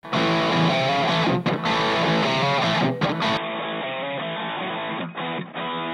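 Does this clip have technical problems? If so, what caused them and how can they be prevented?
Yes. From 3.37 s to the end the sound abruptly turns boxy, with nothing above 3.8 kHz, about 10 dB quieter and carrying a faint new noise floor, with no gap at the switch. This is likely an input switched to a poorer device. A plain low-pass filter would not change level and background noise together. Locking the input device before recording prevents it.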